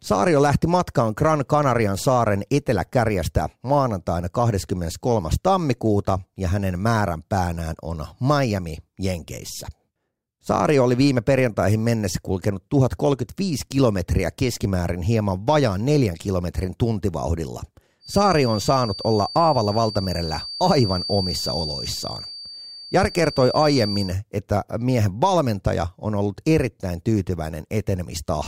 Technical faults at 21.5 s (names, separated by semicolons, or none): feedback whistle